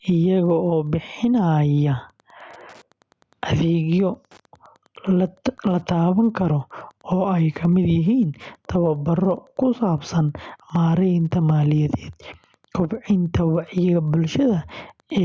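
Throughout the speech, a faint Wi-Fi interference ticking sits roughly 50 dB below the voice, repeating every 102.4 ms, a nearby radio's beacon rectified by the audio circuit. Its strict, metronomic regularity at about ten per second separates it from random crackle or mains hum.

Also running the whole length is gain pumping. The gain swings by around 10 dB. This is likely a gain set far too high with a fast limiter clamping it. The call audio is band-limited, with nothing above 8 kHz.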